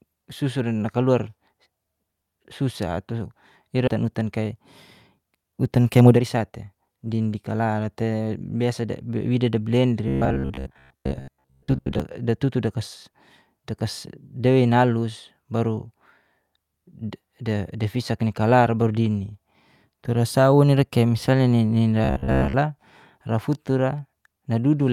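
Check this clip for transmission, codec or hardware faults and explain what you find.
Yes, there are a few transmission faults here, all of the network-jitter kind.

From 3.87 to 3.89 s there's a skip ahead. Roughly a second and a half of speech was dropped while later audio was already queued, so playback jumps straight forward with no gap. The two sides are spliced almost directly and a chunk of speech simply vanishes.

Right after that comes jitter buffer speed-up, from 4.03 to 4.54 s at 107% speed, then 5.19 to 7.74 s at 118%. The buffer was holding too much, so the receiver trimmed tiny pitch-period slices repeatedly. That's about a twentieth of a second in the first stretch and half a second in the second. The speech sounds rushed but keeps its pitch.

Then there's robotic sound from repeated short buffers, from 10.08 to 12.00 s and again from 22.04 to 22.54 s. Most of each stretch is made of repeated fragments, giving a rigid metallic buzz at 66.8 Hz that still loosely tracks the speech. 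That's likely from audio arriving too seldom, with the last 15 ms or so looped to fill the time.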